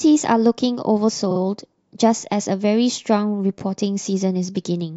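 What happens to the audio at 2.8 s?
Nothing goes wrong at 2.8 s; the speech carries on intact through that moment.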